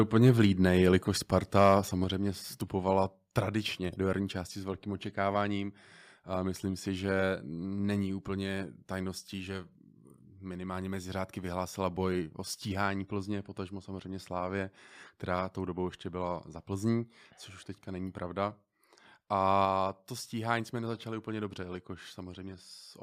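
Speech with two faults, both near the start, one recurring later. The first is microphone overload from 0.16 to 0.41 s and again from 1.56 to 1.72 s. Peaks push about 3 dB and then about 2 dB past the converter's limit. A small share of samples, a few percent at most, have flattened tops. That gives the loudest syllables a harsh, crackly edge. The likely cause is an input gain set too high, so peaks hit the converter's ceiling. The second fault is a microphone volume stepped down. The level drops by about 4 dB at 1.02 s and again at 2.04 s. Each drop follows an overloaded stretch. The voice and the background fall together, abruptly. A smaller step of about 2 dB comes at 19.65 s, just before "to stíhání jsme nezačali". The likely cause is the call software lowering the device's input volume in steps after detecting the hot, clipping signal.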